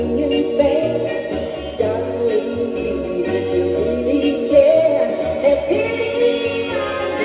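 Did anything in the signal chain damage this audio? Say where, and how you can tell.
No, nothing in the signal chain damaged this audio; the call path leaves its normal narrowband character, with nothing above 4 kHz.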